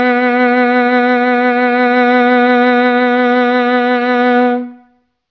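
No technical faults are audible.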